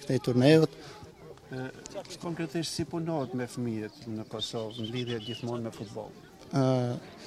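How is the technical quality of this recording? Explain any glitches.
No glitches turn up anywhere in this recording, so there's nothing here that needs explaining.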